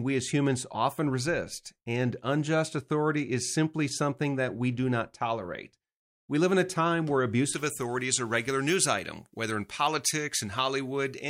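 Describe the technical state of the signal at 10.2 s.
At 10.2 s the speech carries pre-emphasis left on, running from 7.53 s to the end: a J.17 treble boost, about 11 dB at 10 kHz, never de-emphasised, leaving it thin, bright and sibilant.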